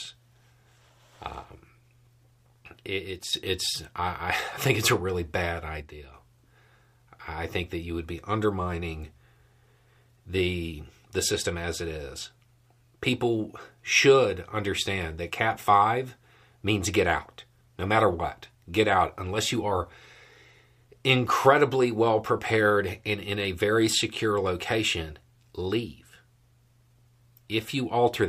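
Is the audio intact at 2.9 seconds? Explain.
No. At 2.9 seconds the speech is inside a brief dip running from 2.86 to 3.33 s. The level falls abruptly by about 6 dB, then returns. This sounds like one channel dropping out. The likely cause is that one side of the stereo pair went silent for roughly half a second. Once both sides are summed to mono, the shared content loses half its contribution. Anything carried only on the missing side vanishes.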